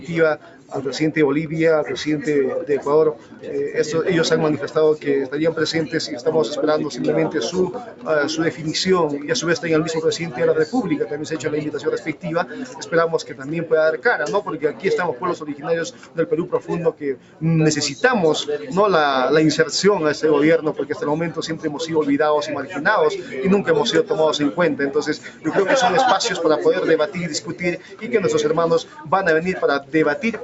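A speech-tuned noise suppressor stays active across the whole clip and treats sustained tones, ambience and decays as noise, pulling them down by around 10 dB. The result is a pumping, unsteady level: onsets punch through while anything held or fading sinks and thins out. The sound is also band-limited to about 8 kHz by the call path, which is normal for that route.

The sound cut by the noise suppressor is clearest at 0.0 to 0.72 s, 3.15 to 3.45 s, 7.77 to 9.28 s, 10.3 to 17.42 s, 22.68 to 23.35 s, 25.17 to 25.47 s, and from 27.07 s to the end. In each stretch the suppressor clamps down hardest, by about 9 dB (about 7 dB at 22.68 s). Tails are chopped short and held parts dip. The longest damage falls in the 10.3 to 17.42 s span, where roughly three seconds in total are audibly sunk.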